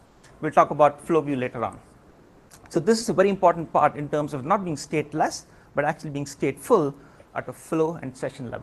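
From 0.05 to 0.23 s, and again from 2.09 to 2.49 s, comfort noise stands in for the background. The real background becomes a smoother noise of a different tone. It is about 3 dB quieter the first time and about 5 dB louder the second. The likely cause is Opus DTX, where the sender stops sending during pauses and the receiver fills them with synthetic noise.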